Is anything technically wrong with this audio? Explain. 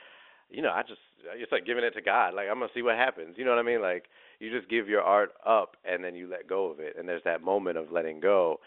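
No, nothing's amiss here: it's just speech carried over ordinary G.711 telephone coding, so the sound lives in the familiar narrow phone band of about 300 Hz to 3.6 kHz, exactly as a landline call would.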